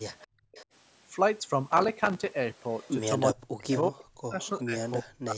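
Speech recorded over a call, with several faults. An echo leak appears at 0.19 to 0.65 s, 2.73 to 2.91 s, 3.71 to 4.01 s, 4.41 to 4.49 s and 4.86 s. A copy of the voice returns about 0.37 s late. It sits from about 30 dB down to about 15 dB below the speech. The loudest is at 3.71 s. The likely cause is a loudspeaker on the far side whose echo canceller let some of its own playback through. The background is gated by the echo canceller from 0.27 to 0.53 s. The room sound drops by about 28 dB for roughly 0.3 s, then returns. The canceller pulled the microphone down while the loudspeaker played. Processor overload crackle runs from 1.68 to 2.31 s. It is a gritty tearing made of many tiny silent gaps, around thirty of them. Each fits a missed buffer of roughly 3 ms. The processor could not keep up, then recovered. From 3.34 s to the end, the speech is suppressed in double talk. The voice dips by as much as roughly 40 dB and breaks up over about 1.5 s in total. 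This is likely because both sides spoke at once, and the canceller turned the talker down along with the echo.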